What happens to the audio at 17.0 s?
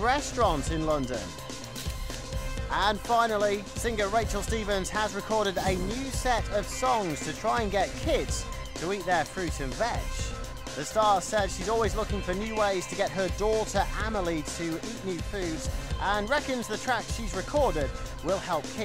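Nothing goes wrong at 17.0 s; the audio plays through that moment intact, with no dropout, click, distortion or other fault.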